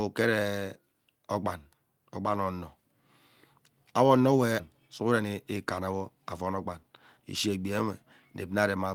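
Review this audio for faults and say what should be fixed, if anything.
A skip ahead occurs at 4.59 to 4.61 s. Roughly 0.7 s of speech is dropped, and playback jumps forward with no gap filled.

Jitter buffer speed-up follows at 5.05 to 5.36 s, at 155% speed, and at 5.80 to 7.57 s, at 109%. Pitch-period cuts remove about 0.15 s each time.

Fix this by sizing the jitter buffer to absorb delay bursts so that it drains gently rather than dropping or compressing audio.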